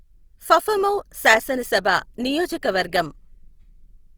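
Opus compression, likely the cause, runs through the whole clip. The speech keeps its full bandwidth, extending up to 20.2 kHz, but the damage is plainly audible. Rather than leaving spectral holes or swirling, the upper bands sound grainy, rough and noisy, as if their energy were kept but refilled from folded lower bands or noise. That texture points to the codec's music (CELT) mode starved of bits, which fits a rate near 24 kbps.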